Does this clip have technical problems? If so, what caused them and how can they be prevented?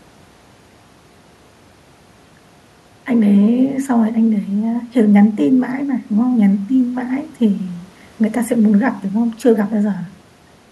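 No, nothing stood out on listening to this speech clip that would point to a technical problem.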